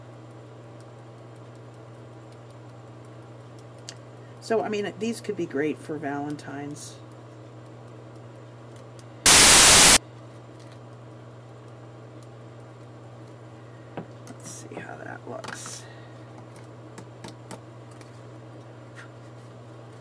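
At 9.26 s the sound cuts straight into a hard-edged burst of very loud white noise that runs until 9.97 s. That's file tags played as audio: an embedded cover picture, compressed data, got read as samples, so it comes out as loud static.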